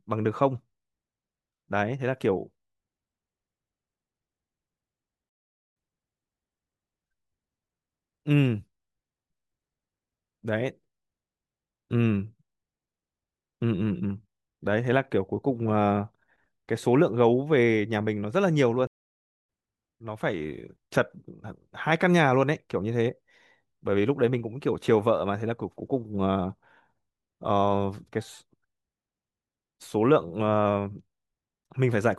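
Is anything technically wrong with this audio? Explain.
Yes. There are two stream reconnects. At 5.29 s the audio drops out for 0.45 s and resumes 0.77 s earlier, repeating material. At 18.87 s a 0.6 s silence resumes about 0.4 s later, skipping ahead. Each time the connection broke and a fresh decoder restarted mid-stream, fading in the first frame.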